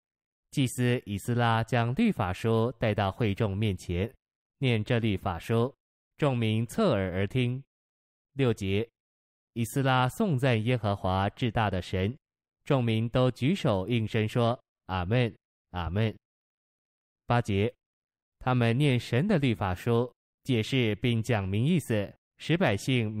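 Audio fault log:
No faults detected.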